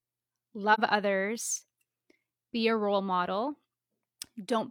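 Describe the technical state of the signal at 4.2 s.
At 4.2 s the speech signal is intact, with no audible fault at that moment.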